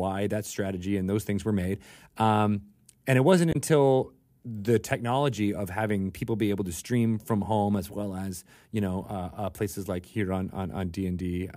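Right after "and it wasn't", at about 3.52 s, there's a quick burst of damaged data in the compressed stream, lasting roughly 40 ms. The decoder hits corrupted frames, loses sync and hunts for the next valid header, which leaves a short glitch in the speech.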